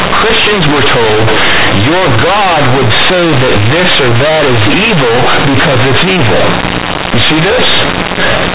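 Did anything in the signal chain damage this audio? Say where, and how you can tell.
Yes: companded audio read as linear, throughout, at sample-format conversion. Mu-law bytes play as raw 8-bit samples without expansion, so quiet passages blare as loudly as speech, with buzzy distortion and heavy noise in pauses.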